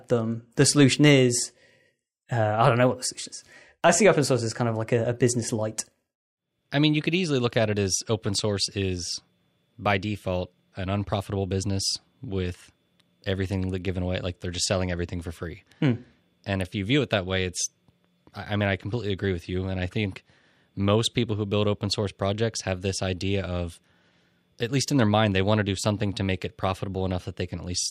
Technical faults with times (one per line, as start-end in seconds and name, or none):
none